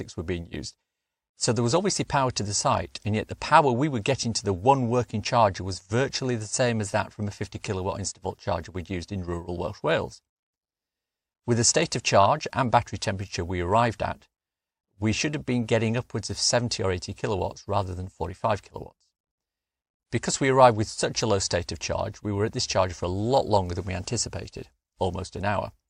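No technical faults occur at any point in the recording, so there are none to describe in time order.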